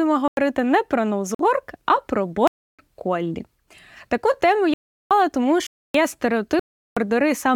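Six blocks of digital silence punch holes in this speech, at 0.28 to 0.37 s, 1.35 to 1.39 s (just before "а про"), 2.47 to 2.79 s (right after "а про"), 4.74 to 5.11 s, 5.67 to 5.94 s and 6.60 to 6.97 s. They run from about 47 to 372 ms, so each is an audible gap where the sound drops out and returns abruptly. The first fits a 4096-sample buffer and the 372 ms ones a 16384-sample block, which points to output buffers going unfilled.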